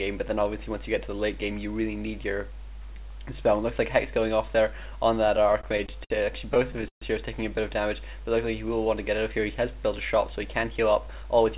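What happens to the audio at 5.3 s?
From 5.28 to 6.12 s the audio hits repeated stalls (stutter). The jitter buffer ran empty eight times, and the receiver held the last sound for up to 60 ms each time, so the audio drags and hiccups without losing anything. A spectrogram shows brief frozen, smeared strips, and the waveform shows short repeated or fading stretches.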